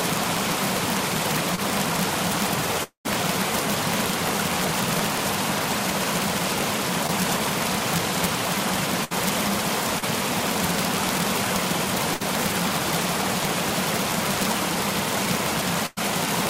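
All the way through, the loudest peaks snap into harsh cracks. That's integer overflow: the level runs about 6 dB too hot, and instead of being limited, the few samples that cross the ceiling wrap to the opposite sign. It's much nastier than ordinary clipping.

At 1.55, 7.07 and 9.99 s there are short concealed packet losses: about 20, 20 and 40 ms never arrived. The decoder patched each gap by carrying the previous sound forward and blending back, so you get a quick smear or wobble.

From 2.83 to 3.07 s the audio drops out for about 220 ms. The last sound gets stretched into a fading buzz or hiss, then there's a moment of silence before it jumps ahead. The likely cause is a long network dropout.

At 9.04, 12.14 and 15.86 s there are bursts of packet loss of about 60, 60 and 100 ms. Each time, the receiver held the last sound and faded it like a dying buzz or hiss, then picked up further along with the middle missing.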